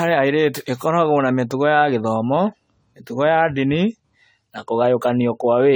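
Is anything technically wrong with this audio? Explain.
Yes, the speech shows generation loss from start to finish. The audio was likely decoded and re-encoded about seven times through a lossy AAC-LC codec, consistent with a 64 kbit/s setting. Because each pass cuts the signal into frames on a slightly different grid and quantises it again, the errors and missing spectral bands pile up rather than cancel. The result sounds swirly, smeared and hollow, with consonant onsets and other attacks blurred.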